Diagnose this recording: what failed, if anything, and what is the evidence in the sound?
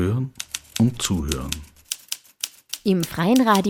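Nothing in the signal chain shows a failure: no dropouts, clicks, clipping, level jumps, pitch shifts or other breaks can be heard anywhere in the recording.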